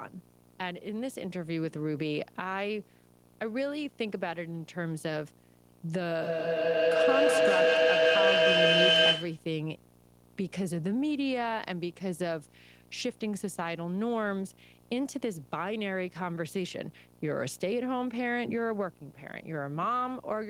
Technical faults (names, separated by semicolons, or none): video or display buzz; feedback echo between two devices